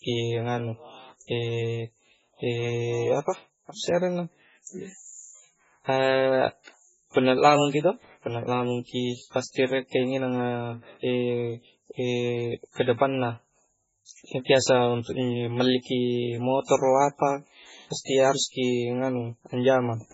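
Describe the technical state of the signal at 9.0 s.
At 9.0 s the speech carries heavy damage that runs through the whole clip, likely MP3 compression at a very low bitrate, around 16 kbps. Nothing remains above 7.7 kHz, and weak frequency lines flicker between frames, giving a watery swirl that a plain low-pass filter would not produce.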